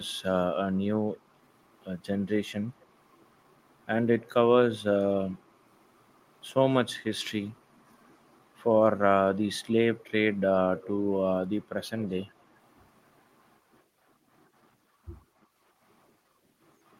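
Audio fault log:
2.8, 4.19, 9.98 and 10.77 s: echo leak. Short scraps of the speech, 50 to 110 ms long, return about 250 ms late and well below the direct speech, loudest at 10.77 s. This is likely a far-end loudspeaker feeding back through an echo canceller that did not fully remove it.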